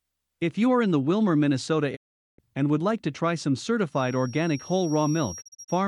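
From 1.95 to 2.40 s the speech fades out within about 20 ms and goes silent until just before "and would like to". This is a digital broadcast dropout. The receiver lost roughly 0.42 s of corrupted frames and muted rather than play them.

From 3.88 s, right after "like to try some", a thin, steady whistle at 5.6 kHz sits well below the speech, swelling and fading slowly in level, through to the end. This feedback whistle likely comes from a loudspeaker-to-microphone loop held just short of runaway.

Between 5.40 and 5.70 s, the dropout returns as several brief holes rather than one gap. About 128 ms of sound is missing in total, the longest hole lasting about 32 ms, each with the same quick fade.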